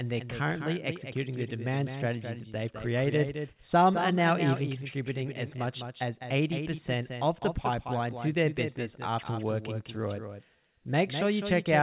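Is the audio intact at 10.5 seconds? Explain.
No. A doubled audio track runs through the whole clip, including 10.5 s: a second full-band copy, about 10 dB quieter, trails roughly a fifth of a second behind, likely from a second, slower capture path, giving a dry, echo-like double with no room decay.

Clock drift between sender and receiver is also present at 10.5 s. The sender's clock runs about 2% slow, so the receiver's jitter buffer keeps draining and must fill gaps to keep playback going, which makes the timing feel slightly unsteady.

Repeated timing corrections span 0.05 to 11.69 s, covering this moment. Playback runs at 98% speed, with small inserted pieces adding up to about a fifth of a second overall. They are unevenly spaced and all lengthen the sound, heard, if at all, as faint hiccups within the telephone-band audio, which has nothing above 4 kHz.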